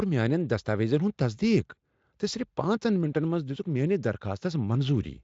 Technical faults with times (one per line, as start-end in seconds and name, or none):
none